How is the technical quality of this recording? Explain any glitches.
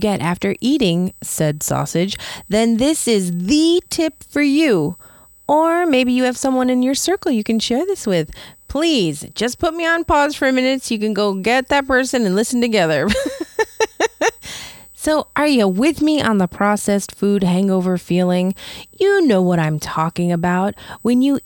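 A steady, thin whine runs under the speech for the whole recording, and it is the one technical fault here. This is USB whine: a fixed-pitch tone at 8 kHz, with its strongest component an octave higher at 16 kHz, sitting roughly 30 dB below the speech. The 8 kHz fundamental matches the 125-microsecond microframe rate of a high-speed USB bus, whose pulsed current draw is leaking into the audio path through shared power or ground.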